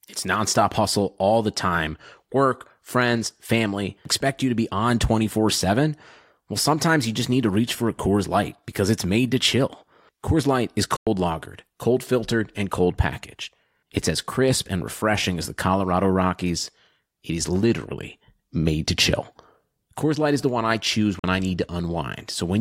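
A Bluetooth dropout opens a silent gap of about 100 ms at 10.96–11.07 s, just before "lagered cold filtered and", and another of about 44 ms at 21.19–21.24 s, between "the one I choose" and "I need". Likely cause: late wireless packets dropped, so speech resumes as though it had continued.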